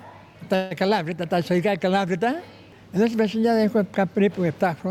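A call audio freeze from 0.55 to 0.73 s stretches the last sound into a fading buzz, seen as flat spectrogram smears, likely from delayed packets. Nothing is lost.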